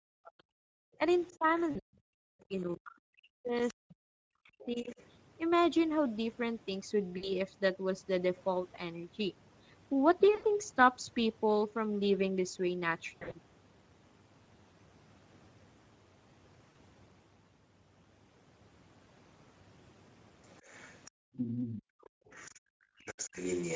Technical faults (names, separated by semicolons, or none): Speex codec; speech suppressed in double talk; other side's voice leaking through; background gated by the echo canceller; VoIP packet loss concealed by the speech codec